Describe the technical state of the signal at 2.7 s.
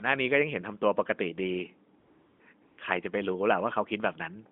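At 2.7 s the signal is AMR comfort noise, running from 2.62 to 2.78 s: speech frames stop for 160 ms and the receiver substitutes smooth, steady synthetic noise for the real background.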